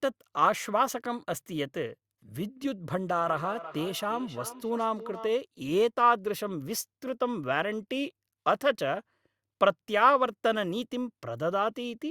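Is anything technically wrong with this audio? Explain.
Yes. Feedback echo between two devices runs from 3.15 to 5.36 s: a second device in the room replays the call, the microphone recaptures it, and neither echo canceller removes the other's output. Speech returns roughly every 300 ms, thin and ringing, peaking about 16 dB below the voice.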